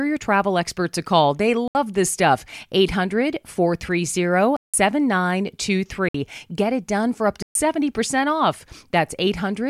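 Blocks of digital silence cut in at 1.68–1.75 s (72 ms), 4.57–4.74 s (171 ms, fitting one lost 8192-sample buffer), 6.09–6.14 s (58 ms) and 7.42–7.55 s (128 ms). Likely unfilled output buffers leave short holes. The waveform shows flat near-silent runs, and the spectrogram shows blank columns.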